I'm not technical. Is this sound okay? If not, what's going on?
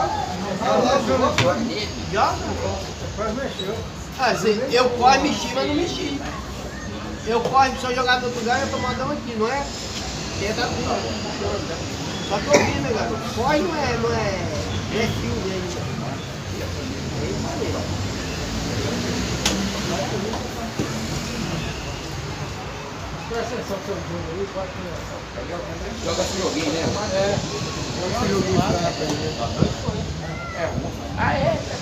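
Yes, nothing in the recording's technical signal stands out as a problem, so there's nothing to fix.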